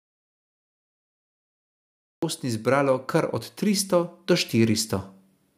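From about 2.41 s the level starts creeping up, and it keeps climbing until around 4.95 s, ending roughly 7 dB louder. That's automatic gain rising: the AGC decided the input was too quiet and slowly pushed its gain up over those two and a half seconds. Because it's a gain change on the whole signal, the speech and the background noise swell together, so the room seems to get louder along with the voice.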